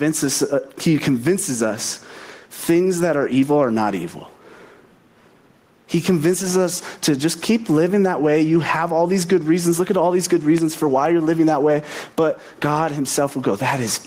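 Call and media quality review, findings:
Gain pumping, throughout: gain ducks under each loud syllable, with a level swing of roughly 10 dB. Likely cause is input gain set far too high, with a fast limiter or compressor clamping every peak. On a waveform the envelope looks flattened and squashed.

Loud pop, 10.58–10.60 s, between "at all these good" and "for why you're living": a single sharp pop, peaking about 10 dB above the speech, while the speech continues underneath. Likely cause is a voltage step from a plug, switch, static or driver glitch. On the waveform it is a narrow spike. On the spectrogram it is a thin vertical broadband stripe.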